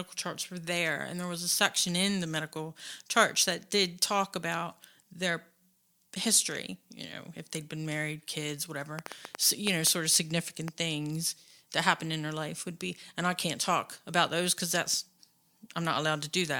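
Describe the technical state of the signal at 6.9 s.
At 6.9 s the speech signal is intact, with no audible fault of any kind at that point.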